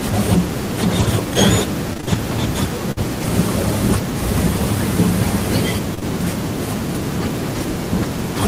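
Around 0.99 to 1.05 s the sound turns briefly rougher and noisier without any gap: a lost packet rebuilt from error correction. Two packets went missing, and the decoder played the low-bitrate copies carried in the following packets, about 40 ms of coarser audio.

From 1.93 to 2.18 s the speech goes choppy, the robotic sound of repeated packet loss. Four separate holes, none longer than 20 ms, were each patched by extending the previous sound, so roughly a third of that stretch is filler.

At 2.92 to 2.99 s a burst of packet loss leaves a held, fading buzz or hiss. About 40 ms of the call never arrived, and the receiver stretched the last sound across roughly 50 ms before resuming further on.

Between 5.95 and 6.04 s there is a brief smear and wobble from short concealed packet loss, two overlapping instances. Each dropped about 20 ms that the receiver filled by continuing the preceding sound, and about 9 ms of the original audio is cut out entirely.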